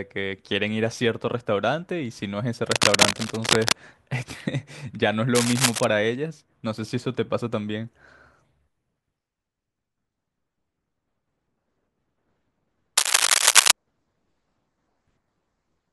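Cable scratch noise cuts in from 2.71 to 3.75 s, 5.35 to 5.85 s and 12.97 to 13.71 s. Dense, uneven crackly rustling sits over the speech, around its level or louder, strongest in the last burst. A worn cable or connector shifting is the likely cause.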